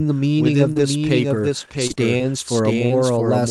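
A doubled audio track runs through the whole of this speech recording: a second, full-band copy trails the original by roughly 0.7 s at about 5 dB quieter, with no decay or room colouring of its own, so every phrase is shadowed by a dry, slightly softer repeat that enters and leaves abruptly; the likely cause is a second, slower capture path or an edit that left two copies out of step. Lost packets rebuilt from error correction appear early, at 0.43, 0.47, 0.51, 0.65, 0.77 and 0.81 s, each lasting 20 ms. In each case the packet never arrived, but the next one carried a low-bitrate duplicate via Opus in-band forward error correction, so the decoder played that instead of leaving a hole, giving short patches that sound rougher and noisier than the surrounding audio. A short concealed packet loss sits between them at 0.73 to 0.77 s, where about 20 ms had no backup copy: the receiver extended the preceding sound, pitch-following or as shaped noise, then cross-faded back, leaving a brief smear or wobble. 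Scattered short gaps follow from 1.35 to 3.32 s, roughly five separate holes, the longest around 40 ms, each patched by continuing the last sound, so the speech stays clear but carries occasional hiccups and smears across that stretch, all heard through an Opus call path at 64 kbps with audio extending to 12 kHz.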